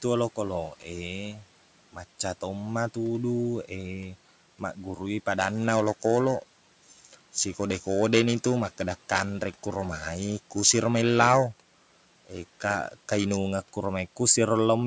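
At 1.34 s the noise suppressor cuts into the speech. For about a tenth of a second, until 1.44 s, it mistakes part of the speech for background noise and turns it down along with the room noise, which sits about 25 dB below the speech. The deepest dip is about 7 dB. The sound there goes briefly faint and swallowed, as if it were pulled back from the microphone for an instant.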